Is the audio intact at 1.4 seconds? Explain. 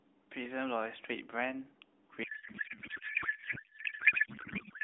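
Yes, at 1.4 seconds the speech comes through intact, carried on a narrowband mobile line at about 12.2 kbps with nothing interrupting or damaging it at that point.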